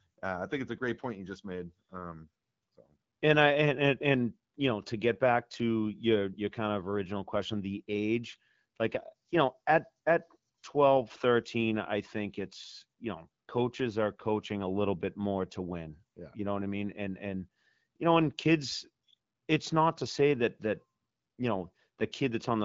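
No technical faults are audible.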